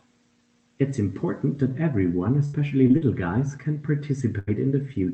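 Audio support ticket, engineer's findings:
Repeated packet loss (robotic sound), 2.45 to 3.03 s. Choppy speech with pieces missing from four concealment gaps, longest 77 ms, about 27% of the span. Each lost stretch is patched by extending the previous sound. Spectrogram: smeared, repeated harmonic bands with abrupt seams.

Burst of packet loss, 4.39 to 4.49 s. About 80 ms of audio missing, filled by the jitter buffer continuing the last sound while fading it. Waveform: a decaying tail, then a hard restart. Opus band limit near 8 kHz.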